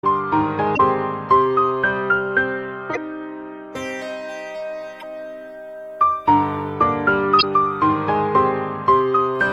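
Damaged data in a compressed stream breaks into the music four times: 0.75–0.80 s, 2.91–2.97 s, 4.98–5.03 s and 7.38–7.44 s. Each time, corrupt bytes make the decoder misread frames and search for the next header, leaving a roughly 60 ms disruption.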